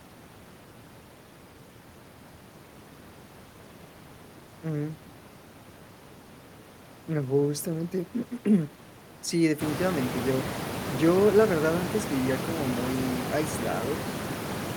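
Nothing in the speech stood out as a technical fault on listening; the room noise behind it comes up by about 16 dB at around nine and a half seconds and then sits roughly 8 dB below the speech, which is simply part of the recording space.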